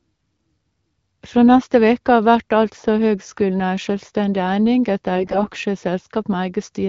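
AMR bit errors at 5.15–5.52 s in this speech: flipped, weakly protected bits misplace the codec's excitation pulses, making the voice briefly hoarse and gargly.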